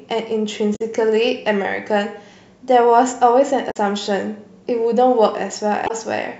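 Three short bursts of damaged data in a compressed stream occur in the speech, at 0.72 to 0.81 s, 3.67 to 3.77 s and 5.84 to 5.91 s, each under a tenth of a second. At each point the compressed data is corrupted, so the decoder misreads those frames, loses frame sync and has to hunt for the next valid header. The result is a brief chirp, squawk, click or short hole in the speech.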